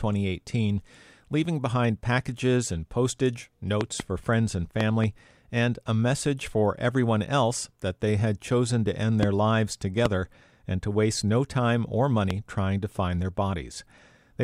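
Loud pops break through the speech in five places: a double pop at 3.81 to 4.02 s, another pair at 4.81 to 5.06 s, then single pops at 9.23 to 9.25 s after "had chosen to end", at 10.06 to 10.08 s just before "and to waste no", and at 12.31 to 12.33 s between "waste no time or" and "trying to find their". Each jumps about 15 dB above the speech, which is likely a voltage spike from a switch, plug or static discharge added to the signal. Unlike a dropout click, nothing is lost, and the speech runs on unbroken beneath each thump.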